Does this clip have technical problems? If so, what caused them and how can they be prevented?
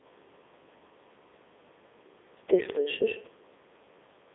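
Yes. The entire clip of speech carries Codec 2 vocoder damage. The voice sounds robotic and buzzy because the decoder rebuilt it from sine waves driven by pitch, voicing, energy and a spectral envelope rather than from the original waveform. The band runs from about 250 Hz to 3.6 kHz with nothing above 3.8 kHz, and the heavy smearing fits the codec's top 3.2 kbit/s mode. To prevent it, record or transmit through a waveform codec at a higher bitrate instead of a low-rate vocoder.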